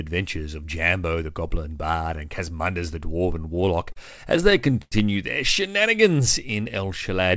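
From 3.32 to 3.98 s and again from 4.37 to 4.94 s the speech shows repeated stalls (stutter). Packets reached the receiver late, so its jitter buffer kept running dry, and each time it stretched the last sound until data arrived. The first span holds seven short holds adding about 92 ms, none longer than 40 ms. The second has six adding 151 ms, one lasting 98 ms, and that longest hold fades. Nothing is lost, but the speech drags and hiccups. On a spectrogram the held stretches appear as smeared, flat-topped harmonic bands, with the whole spectrum still stopping at 8 kHz, as it does throughout the call.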